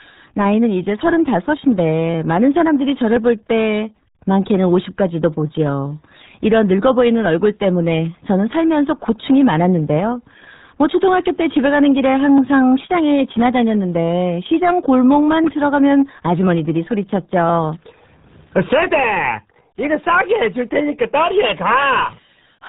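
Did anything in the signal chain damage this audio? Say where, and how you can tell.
Yes. The speech sounds muffled and gargly from start to finish, with nothing above about 3.8 kHz. That points to the codec stage, specifically the RealAudio 14.4 codec, a dial-up speech coder whose heavy damage fits an 8 kbit/s rate.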